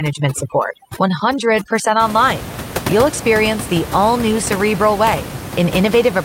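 From 0.0 to 2.0 s there is overdone noise removal. A noise reduction stage was pushed too hard here. It treats individual frequency bands near its noise estimate as unwanted and cuts them almost to nothing. Quiet detail in the speech is cut along with them. The gaps between sounds drop to near silence, dotted with twinkling specks. After 2.0 s the room noise, about 10 dB below the speech, returns.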